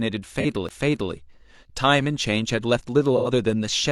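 At 0.40 s the speech smears for about 43 ms. This is AAC frame loss with concealment. A compressed frame went missing, and the decoder rebuilt the gap from the last good spectrum. The patch sounds noisy and phasey. Its length fits a single lost frame. At 3.17 s the same fault returns and lasts about 85 ms, to 3.28 s. That length fits two lost frames in a row, so the smeared patch is longer.

At 0.69 s there is a CD skip. A knock or a disc flaw made the laser jump to another turn of the spiral. The player mutes very briefly, for around 20 ms. Playback then resumes from a different point in the speech, so the flow breaks abruptly.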